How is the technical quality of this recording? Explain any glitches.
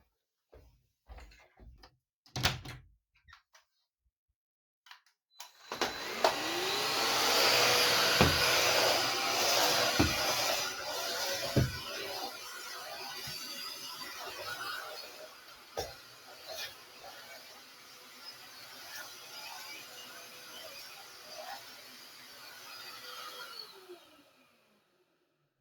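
The technical quality is compromised: a speech-oriented processor is working against this recording of sounds, and it audibly damages the later part.

A noise suppressor applied to music or sounds is active for the whole clip. Built to pull steady background away from a talker, it mistakes sustained tones, ambience and decay tails for noise and keeps riding the gain, with the level of held material swinging by around 20 dB. Onsets slip through while anything lingering is pushed down, so the sound pumps and thins rather than sitting at a stable level.

Sound cut by the noise suppressor occurs at 15.06 to 15.77 s, 15.93 to 16.49 s, 16.69 to 19.4 s, and from 19.56 s to the end. In each stretch the suppressor classed the material as noise and dipped it by about 7 dB, about 8 dB in the final section. The dips are audible as fading, hollowed-out passages where the sustained sound and its decay sink away.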